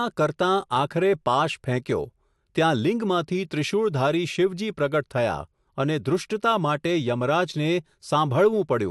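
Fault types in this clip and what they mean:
No faults can be heard.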